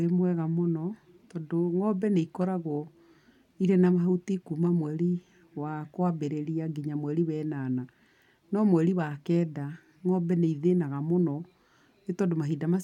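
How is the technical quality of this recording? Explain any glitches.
No technical faults are audible anywhere in the recording.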